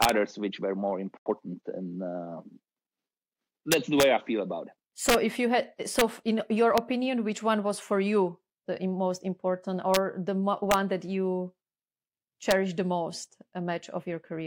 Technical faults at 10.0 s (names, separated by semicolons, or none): integer overflow